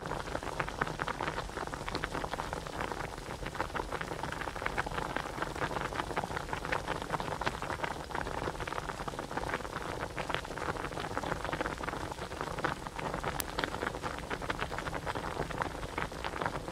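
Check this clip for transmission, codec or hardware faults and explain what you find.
Two short spots of chunks out of order, at about 2.38 to 2.46 s and again at 12.8 to 12.86 s. In each, a 20 ms slice of audio turns up late: three chunks behind where it belongs in the first, two in the second. Nothing goes missing. The pieces just play in the wrong sequence, so each spot comes across as a brief jumbled stutter where the misplaced chunk butts hard against its neighbours.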